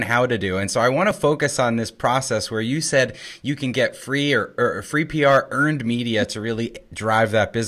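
A stage in the chain was driven past its limit twice, so the speech peaks were cut flat: hard clipping from 2.05 to 2.16 s after "on this" (about 1 dB over) and from 5.24 to 5.37 s after "free or or free" (about 2 dB over), each heard as brief crackle on the peaks.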